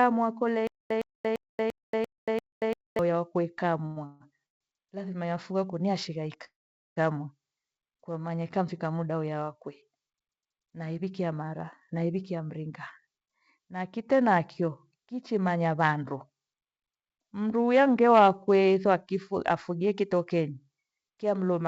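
Stutter with silent gaps runs from 0.67 to 2.99 s. A 111 ms fragment of speech plays, then about 232 ms of dead digital silence follows. The pattern repeats six times on an even 343 ms cycle. This is likely a stalled player or stream that replays its last buffered fragment at each retry and then runs dry. Whatever speech belonged in those gaps is gone, so the passage sounds chopped and mechanical.

Call audio freeze occurs at 3.86, 4.06, 4.46 and 6.44 s, filling 103, 140, 143 and 519 ms. Each time, the last sound is stretched into a buzzy continuation. The third decays into about 140 ms of silence and the fourth into about 440 ms. The likely cause is delayed packets draining the jitter buffer. Speech resumes exactly where it stopped, so the words are delayed rather than lost.

Jitter buffer speed-up spans 11.94 to 19.40 s. The speech runs at 108% of normal pace while its pitch stays unchanged, giving a hurried, clipped delivery. 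The receiver's buffer had swelled beyond its target, so it trimmed many tiny pitch-period slices to catch up, roughly half a second in total. Across the call path, nothing above 8 kHz survives, which fits a G.722 wideband codec.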